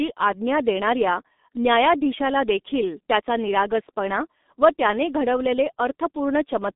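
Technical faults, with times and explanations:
Throughout: G.723.1 codec. The speech is muffled and hoarse, with smeared consonants and nothing above 3.8 kHz, which fits a roughly 6 kbit/s telephony link.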